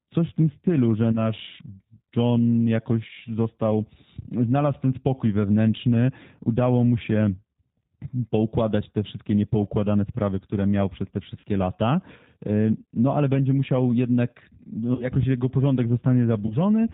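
Throughout, the speech sounds band-limited, rough and faintly synthetic, the plainly audible damage of the G.729 codec, whose sound fits 8 kbit/s and rebuilds speech from a modelled vocal tract and sparse pulses.

At 1.12 to 1.28 s after "w tym stylu że", 11.40 to 11.44 s after "które miał przez te", 14.95 to 15.06 s between "ale będzie musiał jednak" and "jego porządek", and 16.46 to 16.57 s, the sound smears into a fading buzzy tone or coloured noise. This is VoIP packet loss concealed by the speech codec: the decoder extrapolated over 20 ms of missing audio at the first point and 40 ms at each of the others, which fits one and two lost packets.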